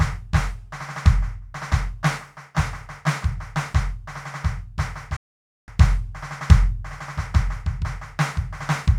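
A music clip with a digital broadcast dropout: from 5.16 to 5.68 s the receiver mutes, fading to silence in about 3 ms, then resumes with that half-second lost, consistent with a run of failed frames. Unlike analogue fading, no hiss or gradual weakening precedes the clean silence.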